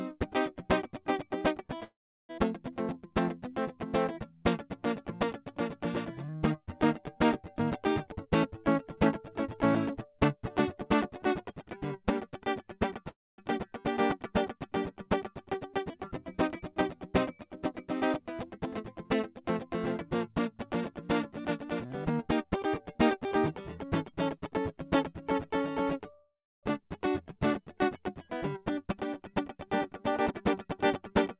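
At 1.84 s the music stops and is held in place: a brief smear of the last sound fades, then about 350 ms of silence, and at 2.31 s it resumes exactly where it left off. This is a call audio freeze. Packets were likely delayed in transit, so the jitter buffer ran dry and the receiver stretched the final sound to fill 449 ms. Nothing is lost, but the rest of the music now runs about half a second later than before.

From 8.11 to 12.40 s the music hurries at about 110% speed with its pitch unchanged, so the tempo pushes ahead. This is a jitter buffer speed-up. The buffer was holding more audio than its target, so the receiver cut out many tiny pitch-period slices, roughly half a second in all, to bring the delay back down.

A second call audio freeze runs from 13.09 to 13.40 s, filling 291 ms, about 230 ms of it silent, before the music picks up where it stopped.

The tempo tightens again from 18.57 to 20.71 s at 104%, with about a tenth of a second removed. 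It happens once more from 21.66 to 24.50 s at 107%, with about 0.2 s removed.

A third freeze lasts from 26.12 to 26.65 s and inserts 504 ms, about 280 ms of it silent.

The last speed-up, from 28.56 to 31.36 s at 111%, trims about 0.3 s.

Throughout, nothing above 4 kHz comes through, consistent with a G.711 mu-law call path at 64 kbps.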